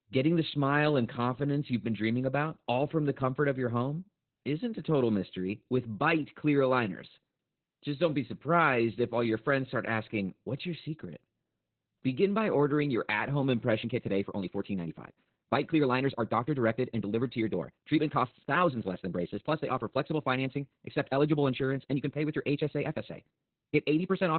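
Speech runs through heavy Opus voice compression from start to finish: narrowband SILK coding leaves nothing above 4.3 kHz, so it sounds muffled, hoarse and faintly robotic, which fits a bitrate of roughly 8 kbps. On a spectrogram the energy stops flat at that ceiling, with smeared, blocky harmonics below. From 13.79 s to the end, just after "ordering your at home", the pace abruptly jumps to about 1.45 times faster while the pitch stays put, sounding rushed. The likely cause is a time-stretched section, with short pieces dropped to shorten it. The waveform shows syllables packed tighter, with harmonic spacing unchanged on the spectrogram.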